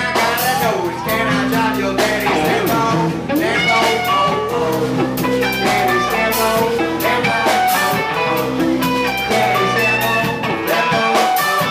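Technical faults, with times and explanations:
No technical faults can be heard in this clip.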